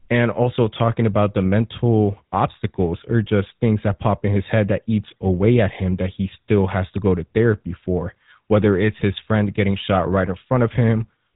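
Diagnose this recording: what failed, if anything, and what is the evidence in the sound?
The failure is at the codec stage: GSM full-rate coding runs throughout, giving the speech a buzzy, gravelly roughness consistent with roughly 13 kbps. Excitation is rebuilt from sparse regular pulses, so a spectrogram shows coarse, smeared harmonics and nothing above 3.8 kHz.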